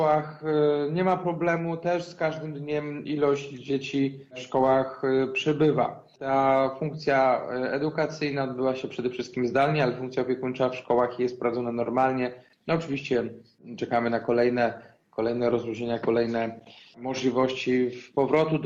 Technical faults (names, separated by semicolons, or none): none